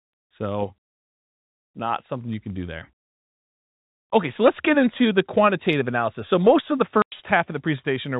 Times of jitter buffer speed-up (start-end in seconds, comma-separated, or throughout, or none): none